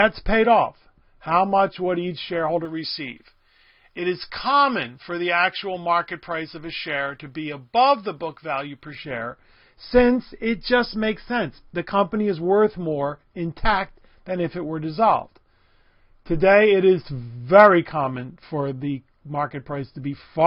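From 2.65 s to 8.95 s the audio has pre-emphasis left on: a treble boost matching the J.17 curve was applied and never undone by the complementary de-emphasis, so 10 kHz sits about 11 dB higher relative to 1 kHz. The sound turns thin and bright, with sharpened sibilance. On a spectrogram the upper band visibly brightens across that span, and the waveform shows spikier, denser high-frequency detail riding on the signal.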